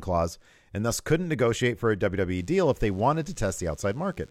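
A speech clip where, from 2.37 s to the end, a thin, steady buzz sits well below the voice. It is DECT cordless phone buzz: a nearby handset or base station's radio bursts every 10 ms are rectified by the audio circuitry, giving a 100 Hz drone rich in harmonics.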